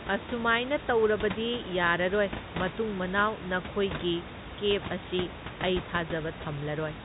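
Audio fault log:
Nothing stood out on listening, with the room noise sitting about 10 dB under the speech and the telephone-band coding passing nothing above 3.8 kHz.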